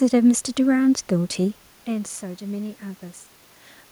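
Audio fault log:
No system fault is present: the speech signal stays continuous and intact, with the room noise coming from the recording space itself and the change in level around 1.5 s coming from the talker shifting position relative to the microphone.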